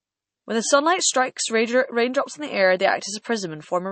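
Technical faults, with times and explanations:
Throughout, MP3 compression. Nothing is present above 8.3 kHz, so the treble stops at a hard edge. The speech sounds watery and swirly. This is likely a bit-starved MP3 encoder, fitting a bitrate near 32 kbps, that zeroes weak frequency lines frame by frame.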